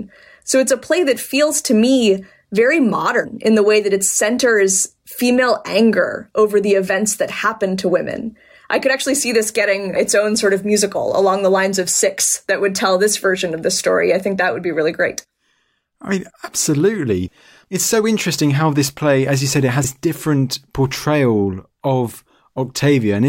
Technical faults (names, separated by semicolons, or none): damaged data in a compressed stream